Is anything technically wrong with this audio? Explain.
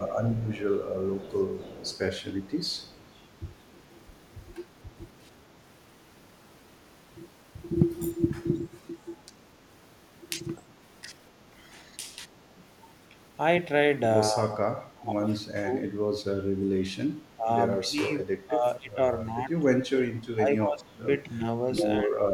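Yes, there are two kinds of problem here.

From 0.07 to 3.08 s, 3.79 to 4.05 s and 10.56 to 10.63 s there's an echo leak. A copy of the speech trails about 253 ms behind, around 20 dB down at first and much fainter later. It's likely a loudspeaker end whose echo canceller let some pickup through.

From 14.31 to 15.84 s, 17.36 to 19.53 s and 20.43 s to the end, there's speech suppressed in double talk. The voice ducks in patches, by up to around 25, 15 and 30 dB, likely because the canceller couldn't separate talker from echo while both were speaking.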